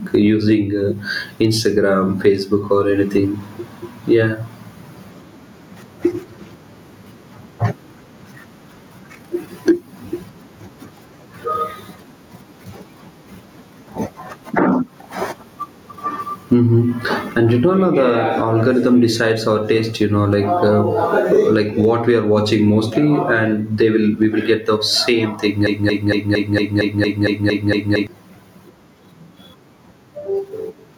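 Gain pumping runs through the whole clip, with the level lurching by roughly 15 dB. The likely cause is input gain set far too high for the microphone, with a fast limiter or compressor clamping down on each loud syllable and releasing in the gaps. Loud and quiet passages are squeezed together, so the speech sounds flattened.

A broken-record loop starts at 25.67 s and runs to 28.07 s. A fragment about 0.23 s long repeats exactly, back to back, ten times, producing a stuttering, mechanical chatter instead of continuing speech. This likely comes from the player, encoder or stream stalling and resending the last chunk it still held. Whatever should have been heard during those 2.4 seconds is gone.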